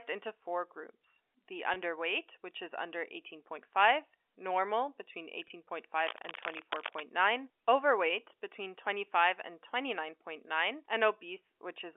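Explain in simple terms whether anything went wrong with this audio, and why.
Two kinds of problem can be heard in this speech.

At 1.74–1.76 s and again at 5.48–5.50 s there is packet loss with pitch repetition. Each time, one small chunk of the call, about 20 ms, never arrived. The receiving phone filled the hole by repeating the last bit of voice it had, so you hear a tiny held, slightly buzzy moment rather than a click or a gap. A scratchy noise would sound rough and uneven. This sounds smooth and tonal.

From 6.07 to 7.01 s there is cable scratch noise: nearly a second of rough, crackly rustling laid over the speech, quite loud compared with the voice. It was likely caused by a worn cable, plug or control being moved, so the electrical contact kept flickering. Unlike the dropouts, it lasts much longer, has no pitch of its own, and sits on top of the speech instead of replacing it.

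Both faults come through the narrow, telephone-like sound of the line.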